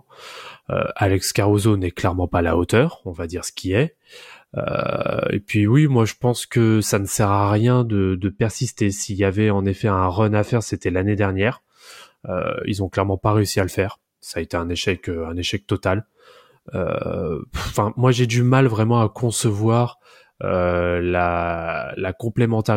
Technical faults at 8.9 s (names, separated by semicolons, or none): de-emphasis applied wrongly